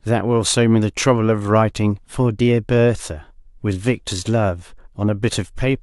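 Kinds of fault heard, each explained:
No technical fault can be heard anywhere in the speech. There is nothing to list under any kind.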